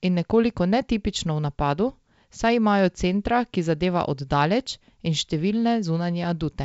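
Nothing stood out on listening to this speech, which carries the band-limited character of G.722 wideband telephone coding, with nothing above about 7.7 kHz.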